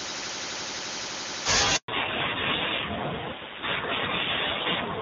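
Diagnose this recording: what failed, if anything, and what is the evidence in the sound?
Network stage, a handover gap: at 1.76 s the speech fades out within a few tens of milliseconds and the line stays silent until 1.88 s, a 120 ms hole. The decay is quick but not a hard click, and no audio returns until the new link is carrying frames. This is the call being switched between networks with no speech frames delivered during the transfer. Whatever was said in those 120 ms is lost.

Codec stage, a fallback to narrowband: from 1.88 s to the end, nothing is left above 4 kHz. The speech turns duller and rougher. Before the gap the wideband HD Voice path was clean, with an airy top end consistent with AMR-WB at about 23.85 kbit/s. After the handover the new link renegotiated down to an older narrowband codec. The band limit and the added roughness fit AMR-NB at around 7.4 kbit/s.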